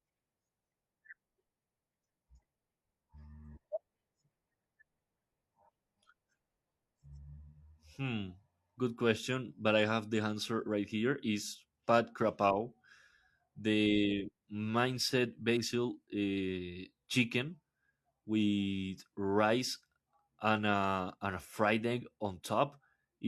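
No technical faults can be heard in this recording.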